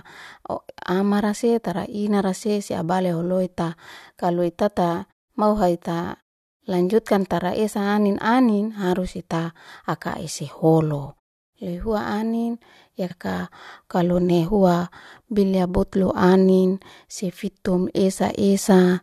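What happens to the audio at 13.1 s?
At 13.1 s the speech jumps ahead with a small blip, likely a stream segment skipped: one chunk failed to load and playback carried on from the next.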